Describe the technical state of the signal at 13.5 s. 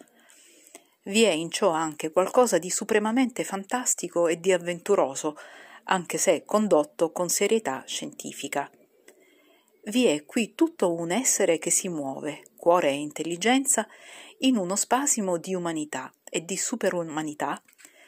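Two devices are likely running on separate, unlocked clocks about 150 ppm apart, so a single sample is dropped or repeated whenever the drift adds up. At 13.5 s these clock slip clicks, present from 0.2 to 18.0 s, tick faintly roughly every 0.15 s through the speech.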